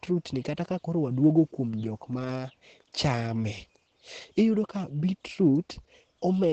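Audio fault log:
Throughout: Opus voice compression. The speech sounds muffled, with nothing above about 8.5 kHz, which fits a wideband voice setting. It is also plainly hoarse and a little robotic. The coder models the voice with linear prediction and spends few bits on the buzzy excitation behind it, so that excitation comes out coarse. The degree of damage points to a low bitrate, around 12 kbps, in the speech-only mode.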